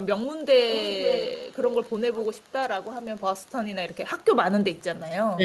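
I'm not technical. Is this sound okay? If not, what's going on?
No. There are three problems.

Throughout the clip there is Wi-Fi interference. A faint tick repeats about ten times a second, once every 102.4 milliseconds. A nearby Wi-Fi radio sends a regular signal, and the audio circuit picks it up as this ticking.

From 0.71 to 1.76 seconds there is an echo leak. A copy of the voice comes back about half a second late, at 468 milliseconds. It is nearly as loud as the original. A fainter scrap returns from 4.19 to 4.25 seconds. The likely cause is a loudspeaker on the other end whose echo canceller let some sound through.

From 5.35 to 5.44 seconds the voice is suppressed in double talk. For about a tenth of a second it drops clearly quieter. This is likely the echo canceller turning the voice down because both sides seemed to talk at once.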